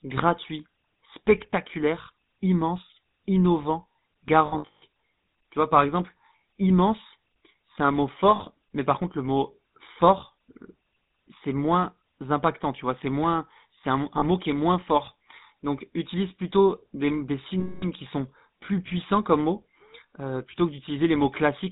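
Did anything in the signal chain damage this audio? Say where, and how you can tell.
Yes. At the codec stage, GSM full-rate codec damage runs throughout: buzzy, gravelly speech with nothing above 4 kHz, consistent with pulse-excited vocal-tract coding at 13 kbit/s.

On the network side, lost GSM frames occur at 4.46–4.83 s, 8.36–8.41 s after "immense c'est un mot", 14.18–14.25 s before "mot qui est moins", and 17.6–17.84 s after "utilise plutôt des". In each gap the last good frame is repeated, which produces a rough, metallic ring.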